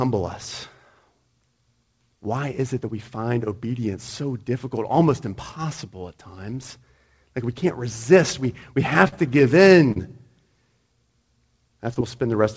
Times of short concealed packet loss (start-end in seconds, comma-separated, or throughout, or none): 9.08-9.14, 9.92-9.98, 11.94-11.97